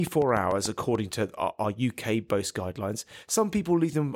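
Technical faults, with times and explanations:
0.07–0.96 s, train of clicks: about seven even ticks at roughly 6.8 per second, peaking about 5 dB above the speech, likely from interference, ending just before "to our".
1.11 s, chunks out of order: a brief jumbled moment, as a 5.8 ms chunk plays two chunks late, leaving hard joins just before "to our".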